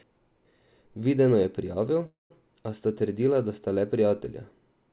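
At 2.06 s the speech halts in a call audio freeze lasting until 2.32 s, most likely because packets stalled in transit and the jitter buffer ran dry. The receiver fills the gap by extending the last sound as a brief decaying buzz that drops to about 150 ms of silence. When the speech resumes it continues where it stopped with nothing lost, but now runs about 240 ms later. The band-limited sound, with nothing above 4 kHz, fits G.711 mu-law at 64 kbps.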